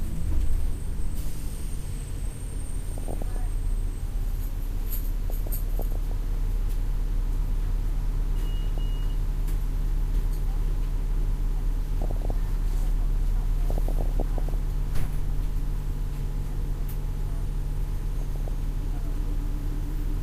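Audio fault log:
2.91–3.36 s, 5.30–6.12 s, 8.78 s, 12.02–12.31 s, 13.70–14.54 s, 18.21–18.48 s: DAB burbling. Weak reception, with a bit error rate under one percent, lets bit errors slip past error correction into the MP2 data. The corrupted samples put short blips of noise in single sub-bands, and corrupted scale factors make sub-bands leap in level for up to a frame, laying blips of noise over the sound.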